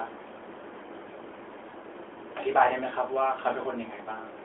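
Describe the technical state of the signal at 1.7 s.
Lost AMR speech frames at 1.70–1.75 s leave a 40 ms gap, which fits two 20 ms frames failing their check. The decoder repeats the last good pitch and vocal tract settings at falling gain, so there is a brief dipping warble. A waveform shows the envelope sagging, and a spectrogram shows harmonics stretching flat and fading.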